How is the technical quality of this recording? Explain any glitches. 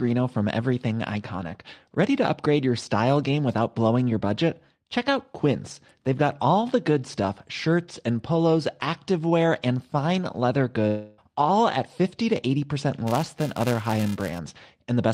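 The speech recording has two audible glitches.

From 10.87 to 11.21 s, a long network dropout likely cut the audio. The receiver stretched the last sound into a fading buzz for about 0.3 s, and the speech resumes without the lost portion.

From 13.07 to 14.39 s, a filter restarted on every block. Each block starts with a small transient, producing a level-following 375 Hz buzz, which fits 128-sample blocks.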